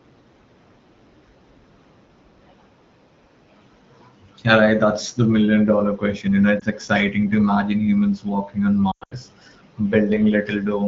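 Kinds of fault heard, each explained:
Lost AMR speech frames: at 6.59 to 6.65 s and again from 8.92 to 9.14 s, corrupted radio frames were discarded and the AMR-WB decoder, running at 12.65 kbit/s, filled each gap by repeating its last good pitch and vocal tract settings at falling gain. The first is a brief dip that points to one lost frame. The second is broken dropout totalling 180 ms spread over 200 ms, with its longest hole 100 ms, fading quickly as wideband concealment does.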